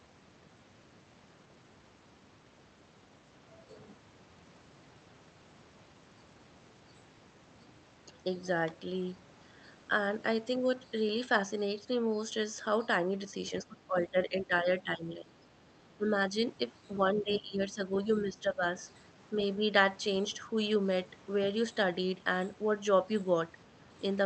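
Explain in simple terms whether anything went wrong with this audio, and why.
Between 13.64 and 19.63 s the speech repeatedly turns quieter in patches: 13.64–15.47, 15.97–16.35, 17.14–18.64 and, only slightly, 19.39–19.63 s. This is speech suppressed in double talk, likely because both sides spoke at once and the echo canceller turned everything down.

At 17.33–17.38 s, a short, faint scrap of a second voice slips in under the talker. This is the other side's voice leaking through: the echo canceller likely failed to fully remove the loudspeaker's sound from the microphone during that moment.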